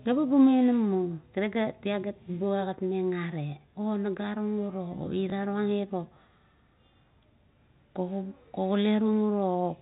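Packet loss with the last packet repeated shows up at about 5.3 s in this speech clip: a single brief gap of about 20 ms, which fits one lost 20 ms packet, was filled by replaying the previous packet. Because that replayed block fills the gap, it comes through as a small blip rather than silence. The G.711 telephone coding holds the band under 4 kHz, with only faint quantisation hiss.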